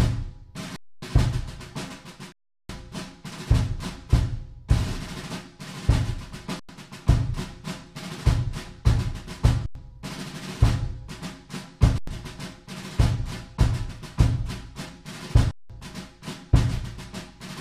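An underrun with held sample strikes at 0.76, 2.32, 6.60, 9.66, 11.98 and 15.51 s, lasting 0.26, 0.37, 0.09, 0.09, 0.09 and 0.19 s. The output buffer empties and the converter freezes on its last value, so the sound halts with little or no click, unlike a zero-filled dropout. Each gap skips roughly 0.3, 0.4, 0.1, 0.1, 0.1 and 0.2 s of live audio.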